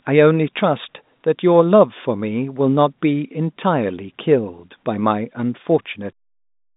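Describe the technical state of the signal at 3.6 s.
At 3.6 s the speech comes through intact, with no fault at that moment, heard through the narrow band of its G.711 telephone coding, which passes nothing above about 3.8 kHz.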